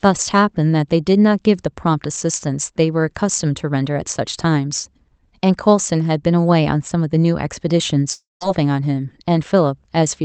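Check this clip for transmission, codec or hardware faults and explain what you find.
There is one transmission fault, a gap near the end of the speech, heard through a call path whose audio stops around 8 kHz.

From 8.13 to 8.43 s there is a long network dropout, likely. The last sound is stretched into a fading buzz, then about 170 ms of silence follows, and roughly 280 ms of speech never returns. Unlike brief packet loss, which is smoothly concealed, this concealment gives up and leaves silence.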